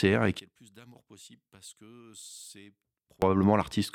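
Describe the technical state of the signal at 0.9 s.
At 0.9 s the speech sits inside a collapse from 0.40 to 3.22 s, about 26 dB down, with its centre gone. The likely cause is one channel inverted, cancelling shared content in mono. A plain gain drop would sound quieter without cancelling the shared content.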